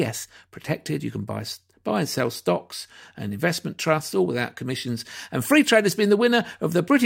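No technical faults can be heard in this recording.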